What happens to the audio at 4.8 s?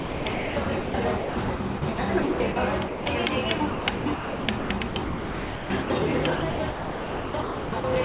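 Sound chopped by the voice detector spans 3.58 to 5.9 s, covering 4.8 s. The sender's detector likely kept cutting transmission, so about 1.6 s of quieter sound became comfort noise, leaving the audio choppy.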